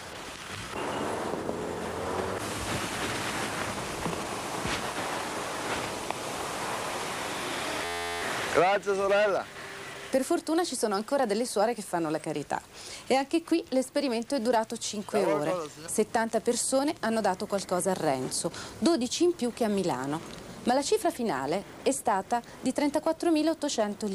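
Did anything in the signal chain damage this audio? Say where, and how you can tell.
Yes. The damage happened at the driver or buffer stage. From 7.85 to 8.22 s a system hang loop replaces the sound with a steady buzz near 86 Hz. One 11.6 ms slice repeats about 32 times, which fits a 512-sample buffer cycling while the system froze. Roughly 0.4 s of audio is lost.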